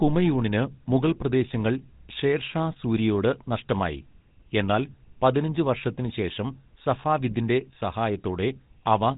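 From start to finish, the speech carries the sound of the GSM full-rate codec. This early mobile codec models the vocal tract and drives it with a sparse train of regular pulses, keeping only a fraction of the excitation detail. The damage is plainly audible. The voice takes on a buzzy, gravelly roughness. Nothing reaches above about 3.8 kHz, so the top end sounds cut off and dull. The texture fits a 13 kbps stream.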